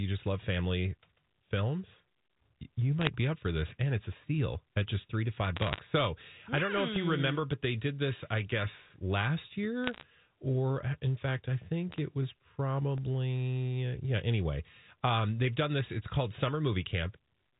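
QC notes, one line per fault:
3.01–3.07 s, 5.56–5.80 s, 9.84–10.03 s, 11.92–11.98 s: bit errors on a digital phone line. Short bursts of sharp ticking crackle over the speech, from flipped bits corrupting individual samples at an error rate of about 0.2 to 0.5 percent.
6.96–14.98 s: periodic USB or driver dropouts. Regular ticks every 2.0 s, five in all, where roughly a millisecond of audio drops to silence as the bus or driver stalls.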